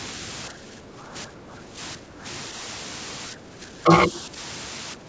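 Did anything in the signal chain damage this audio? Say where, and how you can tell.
Yes. Low bit depth with dither at sample-format conversion, throughout: a steady, even hiss sits only about 5 dB below the speech, without distortion, which fits roughly 6-bit resolution with dithered rounding.

Speech suppressed in double talk at 0.5–1.78, 1.96–2.25, 3.32–3.92, 4.28–4.35 and 4.95–5.09 s: the speech dips by up to about 10 dB, likely from the call's echo canceller ducking during simultaneous talk.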